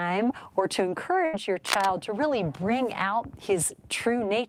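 At 1.25 s there's a burst of packet loss running to about 1.35 s. Around 80 ms of audio never arrived, so the receiver stretched the last bit it had for roughly 78 ms, letting it fade, then jumped ahead with that chunk gone.

Just after, from 1.65 to 1.86 s, you get cable scratch noise: a dense, uneven rustle about as loud as the sound itself. It's likely a worn cable or connector being moved, its contact resistance jittering and spraying noise into the signal.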